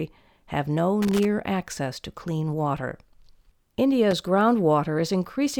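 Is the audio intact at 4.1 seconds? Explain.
No. Loose connector crackle runs from 4.11 to 4.22 seconds, a burst of roughly a tenth of a second in this speech. A worn or dirty contact in the signal path is making and breaking contact as it shifts, so the audio is repeatedly chopped on and off, and any DC present on the line turns each break into a pop. The result is an irregular, scratchy crackle laid over the speech for that brief stretch.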